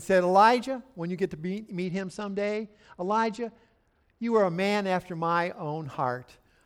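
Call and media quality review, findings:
Bluetooth SBC bit pool drop, 1.85 to 4.45 s, right after "when you get to" until "a man after my". The speech goes dull and gritty because the link squeezed the encoder's budget, which fits a bit pool falling from 31 to 11, about 83 kbps. Top bands starve and the rest quantise coarsely.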